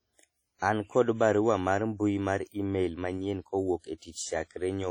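Throughout, the speech carries heavy transform-codec damage, most likely WMA compression. The codec splits the signal into long blocks and quantises each coarsely. The quantisation noise then spreads across tens of milliseconds. Weak spectral lines are zeroed. The result sounds ringing and washy, with a hiss that swells and fades with the voice. The damage points to a low bitrate, around 32 kbps. Nothing is present above 19.8 kHz.

At 0.59 to 0.62 s, a pre-echo appears. A sharp attack falls late in a coding block. The noise sized for that loud onset also fills the quiet moment before it. A short hiss runs about 33 ms ahead of the attack. The onset itself sounds soft and smeared.

At 3.98 to 4.02 s, a second pre-echo occurs. Here the leading hiss stretches about 43 ms. The attack again loses its crisp edge.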